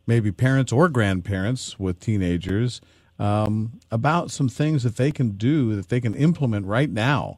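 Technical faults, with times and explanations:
2.49 s (after "parents or grandparents with"), 3.46 s, 5.11 s and 6.13 s: block of digital silence. Samples drop abruptly to silence for 5, 15, 3.3 and 5 ms, and the unfaded edges produce brief ticks.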